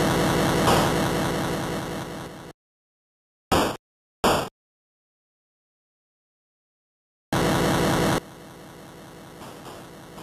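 From 8.18 s to the end at 10.22 s, the sound abruptly drops by about 22 dB. The centred, solid part of the sound almost disappears, leaving a faint residue. The likely cause is one channel inverted: one stereo side had its polarity flipped. When the two sides are combined to mono, everything they share cancels, and only the small difference between them survives, heard as that weak remainder.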